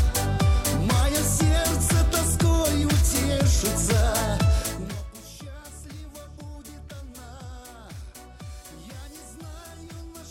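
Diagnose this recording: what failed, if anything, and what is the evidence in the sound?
Nothing in the recording points to a failure at any stage, from the analogue wiring and converter through buffering, processing, transmission and storage to playback, and the signal carries no audible defect.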